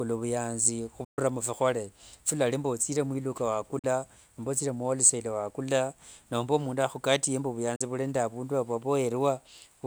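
Speech cuts to abrupt silence at 1.04 s for about 130 ms, at 3.79 s between "kalali mbu othire mwiluka" and "nomba othire muwholesale wakula", and at 7.76 s after "nomba mundu akhukatie mbu", each for about 40 ms. These are Bluetooth dropouts, likely from late packets being discarded. Speech picks up further along, as if it had kept playing, rather than resuming where it stopped.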